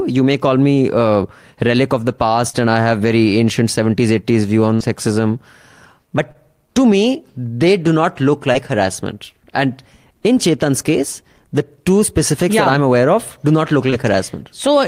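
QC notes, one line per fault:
2.49–2.61 s (after "a relic of the", before "and I have very"), 6.32 s (before "to me they do"), 13.90 s (after "of do not look"): short concealed packet loss. Brief smears where about 40 ms, then 20 ms, of speech never arrived in time, so the receiver continued the preceding sound and blended back.
4.74–4.82 s: burst of packet loss. A held, fading tail covers about 60 ms of missing speech; consecutive packets were lost, so the decoder stretched and attenuated the last sound before resuming.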